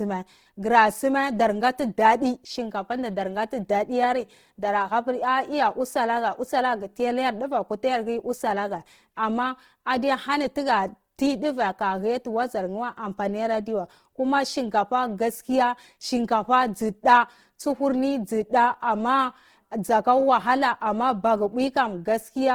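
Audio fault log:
Throughout: Opus compression, likely the cause of the rough, grainy texture across the whole speech clip. The damage is plainly audible. The bandwidth stays full, with content running up to about 20.2 kHz, yet the low bitrate, consistent with roughly 16 kbps in music mode, leaves the encoder short of bits. It keeps each band's energy but fills starved bands with noise or folded copies of lower ones, so harmonics blur into hiss. A spectrogram shows few holes, but the harmonic striations dissolve into speckled noise in the upper bands.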